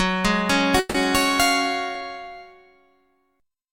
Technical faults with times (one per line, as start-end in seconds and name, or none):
0.79-0.96 call audio freeze